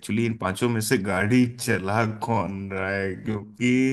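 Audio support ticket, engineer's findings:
Time-stretched section, 1.0 s to end: speech slows to about 0.58x, pitch unchanged, dragging. Likely a stretch algorithm repeating short segments to lengthen.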